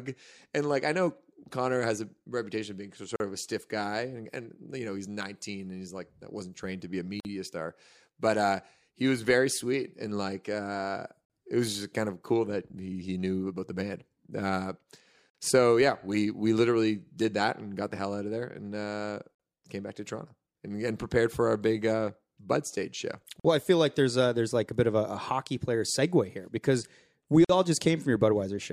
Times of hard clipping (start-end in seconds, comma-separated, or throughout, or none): none